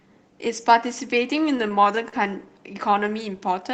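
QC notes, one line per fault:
1.57–2.14 s, repeated stalls (stutter): six brief dropouts, longest 40 ms, filled by stretched, faded repeats of prior sound; waveform shows smeared, repeated cycles.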